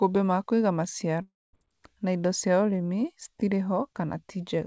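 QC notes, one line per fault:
1.22–1.55 s long network dropout: a fading buzz gives way to 0.23 s of silence, then audio resumes with 0.32 s gone, likely from stalled packets.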